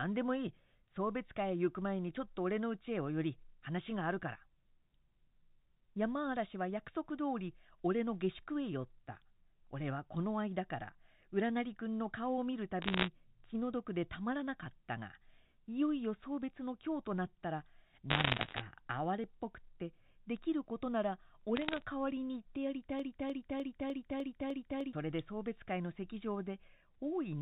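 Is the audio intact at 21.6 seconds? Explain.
No. Bit errors on a digital phone line hit the audio from 21.56 to 21.82 s. With around half a percent of bits flipped on the G.711 mu-law line, each error corrupts a single sample, heard as sharp ticks and crackle over otherwise unchanged speech.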